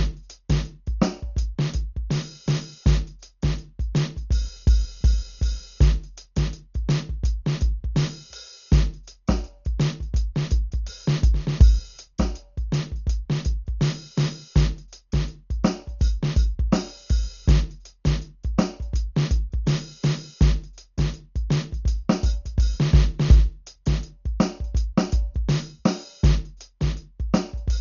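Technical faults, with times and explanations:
Throughout, Dolby Digital compression: the music sounds dull, with nothing above 7 kHz and a rough, fluttering noise around tones. This is likely heavy coding at a rate that fits about 40 kbps, leaving many frequency lines without mantissa bits, so the decoder fills them with noise.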